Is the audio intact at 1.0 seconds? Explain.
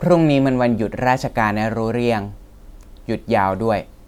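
Yes, the audio is intact at 1.0 seconds, with no dropout, click, distortion or other fault to be heard at that point.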